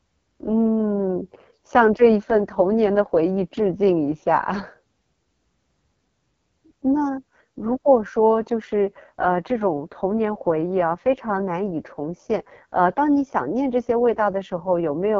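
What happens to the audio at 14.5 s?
At 14.5 s the speech sounds rough and raspy, with no content above about 7.1 kHz. This AMR wideband (HD Voice) codec damage lasts throughout the clip. The pulse-driven vocal tract model is starved of bits, which fits AMR-WB's lowest 6.6 kbit/s mode.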